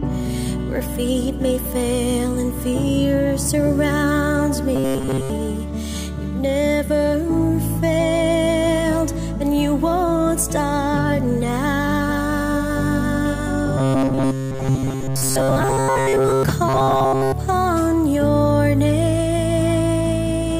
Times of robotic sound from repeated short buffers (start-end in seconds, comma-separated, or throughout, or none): 4.76-5.30, 13.78-16.43, 16.69-17.32